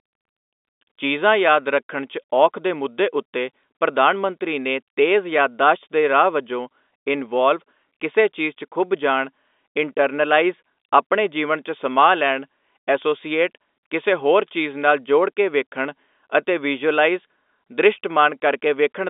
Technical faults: none

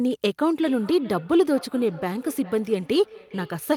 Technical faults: feedback echo between two devices

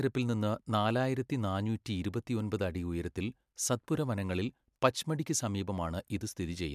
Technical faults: none

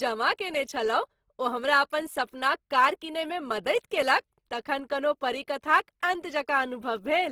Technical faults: Opus compression

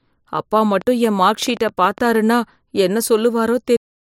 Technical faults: train of clicks; cut-off end

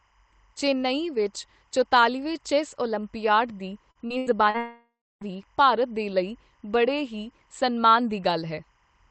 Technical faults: timecode bleed; repeated packet loss (robotic sound); long network dropout

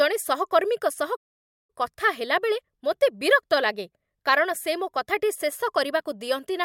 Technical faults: playback stall

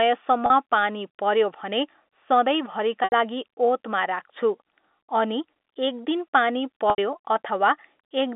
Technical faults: packet loss with pitch repetition

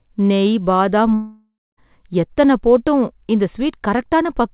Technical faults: long network dropout

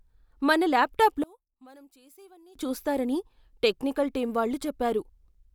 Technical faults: one channel inverted

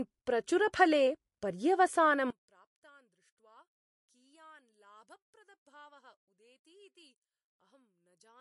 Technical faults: MP3 compression; one channel inverted

